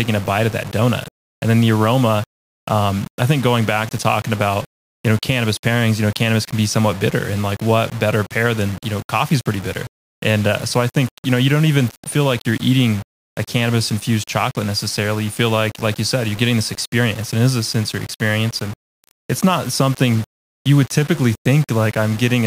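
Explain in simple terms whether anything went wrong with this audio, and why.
Low bit depth without dither runs through the whole clip, from start to finish. The speech sounds grainy and rough, worst in its quietest moments, which crackle or sputter. That likely comes from storing the sound with only five bits, so every level gets rounded coarsely.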